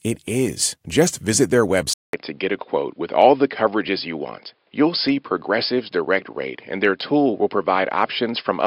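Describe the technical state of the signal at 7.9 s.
At 7.9 s you're still in the dull stretch that runs from 1.93 s to the end. The input was likely switched to a poorer device, so nothing gets through above 5.2 kHz and it sounds boxy.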